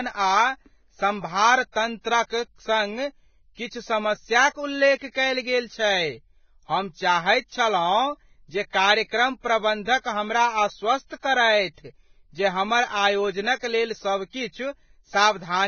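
Throughout the speech, the sound is hissy and grainy, with blurred attacks and nothing above 6.6 kHz. This is likely heavy Vorbis compression. The damage fits a bitrate near 17 kbps, where the encoder removes the treble and coarsely quantises the remaining detail into noise.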